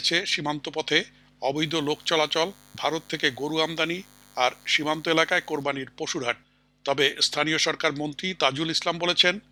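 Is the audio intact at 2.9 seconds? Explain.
No. From 1.56 to 5.64 s there is DECT cordless phone buzz: 100 Hz radio bursts rectified into the audio give a thin, harmonic-rich buzz roughly 30 dB below the signal.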